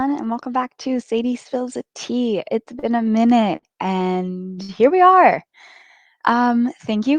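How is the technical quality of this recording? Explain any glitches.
The speech has three short stalls from late packets, at 2.79–2.86 s, 3.56–3.66 s and 4.63–4.72 s. Each time a packet missed its playout slot and the jitter buffer drained, so the receiver held the last sound for 34, 64 and 62 ms, then resumed exactly where it left off. You hear a brief frozen, slightly buzzy stretch, and everything after it lands correspondingly later.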